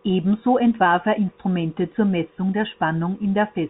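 No technical faults are audible in this speech.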